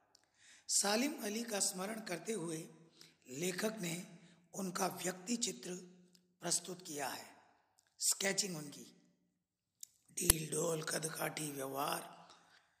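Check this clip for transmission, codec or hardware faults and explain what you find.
One fault is audible: an uninitialised buffer at 10.30 s. It comes through as a single loud, sharp crack of harsh digital noise, lasting only about 6 ms. The cause is a playback block sent out before any audio had been written into it, so whatever leftover values sat in that memory were played as if they were samples. The burst's length fits a 256-sample buffer.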